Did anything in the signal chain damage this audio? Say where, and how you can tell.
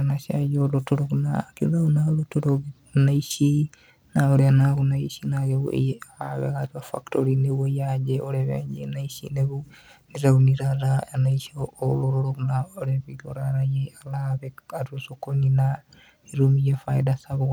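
No, nothing audible in this speech points to damage at any stage of the chain, from capture through to playback.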